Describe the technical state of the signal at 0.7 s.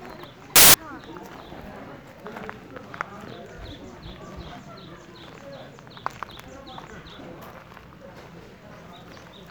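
At 0.7 s the audio falls inside a burst of samples built from the wrong bytes, 0.56 to 0.74 s: misassembled bytes put the fast-changing low bits on top, giving loud, harsh broadband noise.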